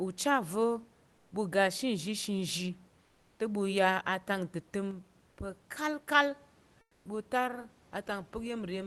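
At 1.15 to 1.31 s and 3.05 to 3.39 s, the pauses carry comfort noise in place of the background. The room noise, sitting about 37 to 38 dB below the loudest speech, gives way to a flat, featureless hiss about 2 dB quieter for 160 ms and then 340 ms, and the real background returns when speech resumes. The likely cause is the codec's discontinuous transmission: the sender stops sending during silence and the receiver synthesises noise to fill the gap.

At 4.91 s a sudden gain jump drops speech and background together by about 5 dB in one step, with no fade, and the lower level holds to the end of the clip. This is likely a gain change applied instantly rather than ramped.

Within that quieter stretch, 6.81 to 7.05 s brings another comfort noise patch of 240 ms. Here the synthetic noise sits about 5 dB below the background around it, a larger drop than in the earlier two.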